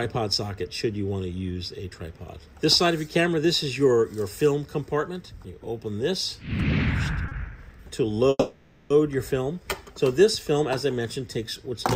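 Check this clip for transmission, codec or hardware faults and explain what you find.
Two delivery faults affect the clip, both caused by packets arriving late rather than being lost.

From 7.28 to 7.33 s there is a short stall from a late packet. One packet missed its playout time and the jitter buffer emptied. The receiver bridged the wait by stretching the last sound for about 30 ms, then resumed from exactly where it paused. Nothing is dropped. A sound is simply held slightly too long, with a faint buzz or small dip, and everything after runs about 30 ms later.

From 8.29 to 8.92 s there is a call audio freeze, most likely from packets being held up in transit long enough to drain the jitter buffer. The receiver kept extending the last sound as a fading buzz or hiss, reaching near-silence for about 20 ms before the delayed packets arrived. Playback then continued from the same point. 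This inserts a pause of roughly 610 ms into the audio without skipping any content.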